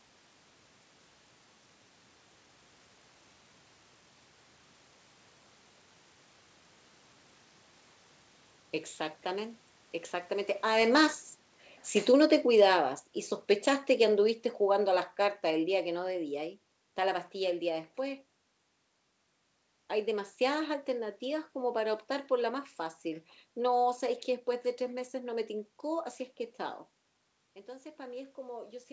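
Automatic gain falling, from 10.64 to 17.27 s, is the fault in this speech recording. The gain control judged the input too loud or its background noise too strong and lowered its gain gradually, so the voice and the room noise behind it sink together by about 14 dB over those six and a half seconds. The drop begins just after the talker shifts position around 10.5 s. Nothing reaches above 8 kHz, which fits a G.722 call path.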